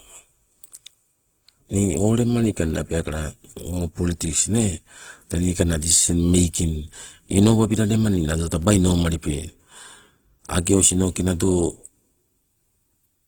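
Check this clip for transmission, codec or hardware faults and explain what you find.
One codec fault runs through the whole speech clip, from start to finish: Opus compression, plainly audible. The likely cause is Opus in its music (CELT) mode at a low rate, around 16 kbps. Bandwidth stays full, reaching about 20.2 kHz. With too few bits, the encoder keeps each band's energy but refills the fine detail by copying lower bands or inserting noise. The result is rough, grainy texture on tonal parts instead of swirling or hollow gaps.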